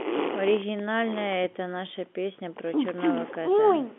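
No technical faults can be heard anywhere in the speech. It comes over G.711 telephone coding, so the sound sits within the line band of 200 Hz to 3.4 kHz with nothing above 3.6 kHz, and the coding leaves at most a faint trace.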